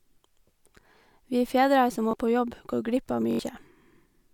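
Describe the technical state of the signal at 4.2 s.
At 4.2 s the signal is intact, with no audible fault.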